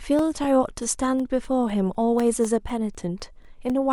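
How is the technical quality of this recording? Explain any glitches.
The recording has one fault: periodic USB or driver dropouts. From 0.19 s to the end, every 0.25 s, a background task stalls the audio driver and about a millisecond of signal is replaced by silence. This produces a steady, regular ticking over the speech.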